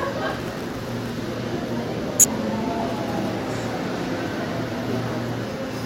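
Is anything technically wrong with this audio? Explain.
Yes, there are two kinds of fault.

From 0.30 to 1.13 s there is processor overload crackle. The processor is falling behind on very short audio buffers, each likely under a millisecond long, and it misses dozens of deadlines in a row. Each missed buffer becomes a tiny hole of silence with abrupt edges, and together they produce a gritty, tearing crackle over the sound. On a waveform this appears as a cluster of narrow dropouts to silence. A spectrogram shows thin vertical broadband streaks throughout that stretch.

Damaged data in a compressed stream appears twice, at 2.19 to 2.25 s and again at 5.25 to 5.29 s. In each place the decoder hits corrupted frames, misreads them, loses sync and then locks back on at the next valid frame header. Each event is a brief chirp, squawk, click or short hole. On a spectrogram it shows as a short disturbance with a visible discontinuity on either side. 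The waveform has a short segment where the signal does not match its surroundings.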